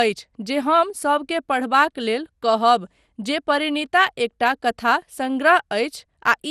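From start to finish the speech sounds swirly, smeared and hollow, with consonant attacks blurred, and a spectrogram shows a hard ceiling with nothing above 15.9 kHz plus patchy holes and speckled noise below it. This is generation loss, most likely from several passes (perhaps around seven) through a lossy codec such as MP2 near 96 kbit/s, each re-quantising on a shifted frame grid so the damage compounds, and transients on the waveform look softened.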